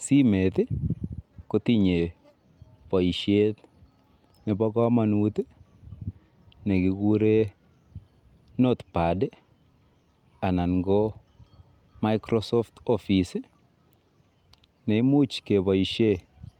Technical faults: none

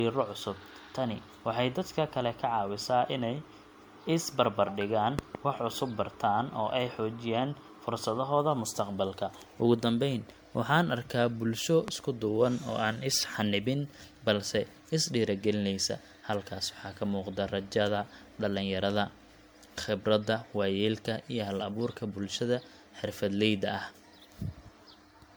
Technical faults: generation loss; loud pop

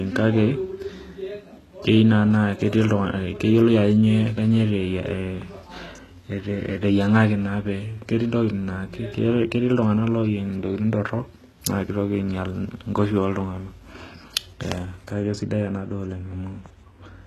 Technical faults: HE-AAC compression; de-emphasis applied wrongly

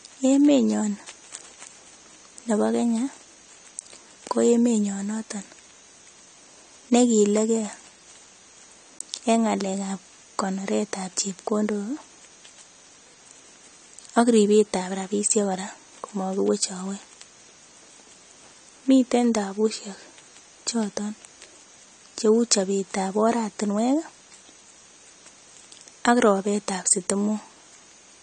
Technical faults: AAC compression

